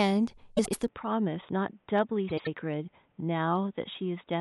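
Frames out of order at 0.57 to 0.75 s and again at 2.29 to 2.48 s break up this speech clip. Each time, two neighbouring blocks of roughly 78 ms play in swapped order, so the stretch comes out as a garbled flutter. Nothing is lost in duration; the halves are simply exchanged. From 0.88 s to the end, the sound abruptly turns dull and boxy, with no gap at the change. The input switched to a poorer device is the likely cause. Everything above 3.8 kHz disappears, the level drops by about 5 dB, and a faint new background noise appears well beneath the speech. That combination points to a narrower-band microphone or a headset call profile taking over mid-recording.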